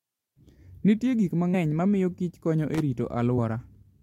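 Compressed frames skipped at 1.53 s: the speech jumps ahead by about 70 ms, which points to roughly three missing or rejected frames.

Loose connector crackle from 2.74 to 2.80 s, just after "konyo e": a worn contact briefly breaks and remakes, chopping the signal into a quick, irregular burst of scratchy crackle.

Compressed frames skipped again at 3.37 s, also after "konyo e": a jump of about 50 ms, roughly two frames.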